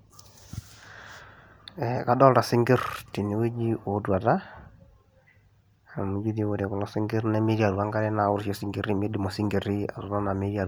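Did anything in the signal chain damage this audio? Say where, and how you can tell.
No, nothing in the signal chain damaged this audio.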